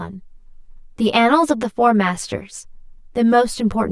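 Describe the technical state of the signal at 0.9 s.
At 0.9 s the speech carries channel delay (comb filtering) throughout: one channel lags roughly 10 ms, cancelling from about 50 Hz upward, giving a hollow tone whose notches stay fixed rather than sweeping.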